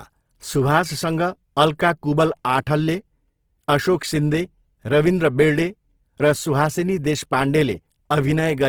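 Opus compression runs through the whole of this speech recording. The sound is plainly grainy and rough, with a noisy, sandy texture over its tonal parts, yet the band stays wide, with content reaching about 20.3 kHz. That points to Opus likely working in its music (CELT) mode at a low rate, near 16 kbps. Bands starved of bits get refilled with folded copies of lower bands or with noise rather than left empty, so the audio roughens instead of swirling.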